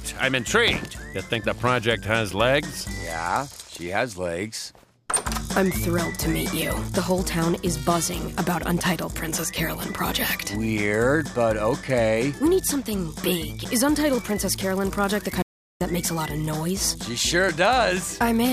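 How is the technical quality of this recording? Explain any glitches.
There is one glitch: an audio dropout to silence from 15.42 to 15.81 s. The sound cuts off abruptly for about 0.39 s, likely from lost input, leaving a flat, empty waveform and a blank spectrogram column.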